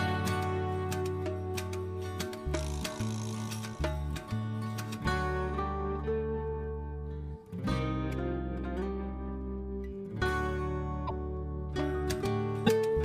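At 11.06 to 11.11 s and again at 12.66 to 12.69 s, the sound skips forward and a short garbled stretch of roughly 30 to 45 ms replaces it. The likely cause is a broken MP3 bit reservoir. Frames of about 26 ms were dropped, and the next frame reached back for borrowed data that now belonged to a different frame. Playback resumes further along, and the first frame or two after each cut decode as corrupted fragments.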